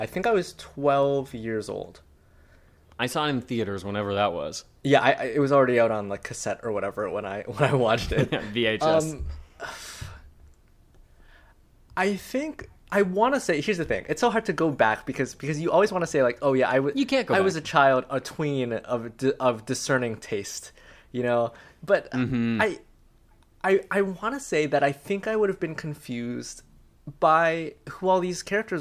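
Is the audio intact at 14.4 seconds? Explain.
Yes, the speech at 14.4 seconds is intact, with no dropout, click, distortion or other fault at that moment.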